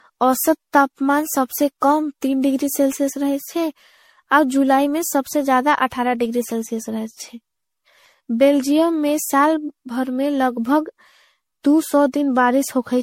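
Speech that carries generation loss from start to finish: it sounds swirly, hollow and smeared, with consonant attacks blurred more than a single encode would explain, likely from around ten passes through a lossy codec whose character fits MP3 at about 64 kbit/s. On a spectrogram the content stops sharply at 16.5 kHz, with blotchy holes and grainy noise accumulated below it, while the waveform shows softened transient onsets.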